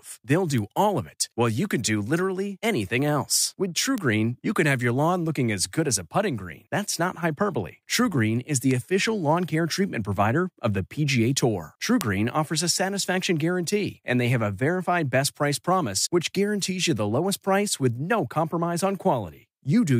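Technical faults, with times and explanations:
0.58, 3.98, 8.71 and 12.01 s, bit error spikes: a flipped bit briefly throws individual sample values off by a power of two, giving sharp, broadband ticks unrelated to the speech, just before "all of it while" and between "is the" and "official lawn care treatment", peaking at about -13, -7, -13 and -1 dBFS. Each tick is so brief it fits one to three corrupted samples.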